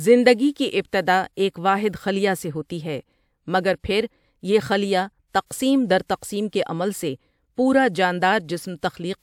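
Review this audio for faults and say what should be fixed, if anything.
Nothing stood out on listening to this speech recording, so there is nothing to fix.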